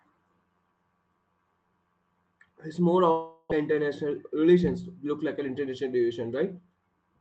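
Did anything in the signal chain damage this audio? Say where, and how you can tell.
Yes. At the network stage, from 3.11 to 3.54 s, a fading buzz replaces 0.4 s of lost sound, likely a long network dropout rather than a brief packet-loss glitch.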